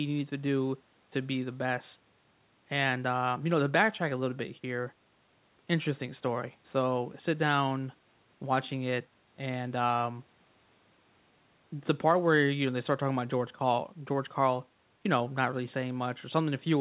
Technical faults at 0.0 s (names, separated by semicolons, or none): none